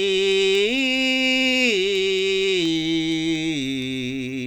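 Music, marred by word clock ticks from 0.32 to 4.29 s: around twenty sharp ticks of uneven strength, about every fifth of a second. A receiver clock running roughly 100 ppm off the sender fits one sample slipping each time. The steady spacing rules out random clicks or dropouts.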